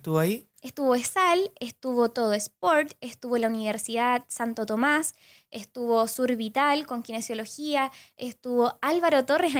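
Nothing is technically wrong in this speech recording, which has gone through Opus voice compression at 24 kbps in hybrid mode, keeps its full bandwidth, and carries only the light coding texture you'd expect at that rate.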